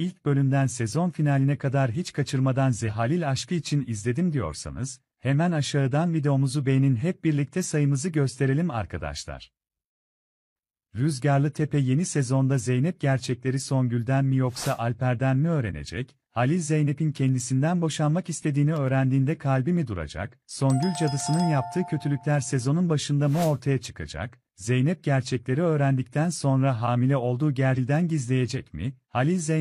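At 2.84 to 2.90 s, compressed frames are skipped. The decoder drops a run of compressed frames, so the audio leaps forward. The jump is about half a second, which points to roughly ten frames of 46.4 ms each. At 27.73 to 27.79 s it happens again. This time it skips about 0.7 s, pointing to around fifteen frames.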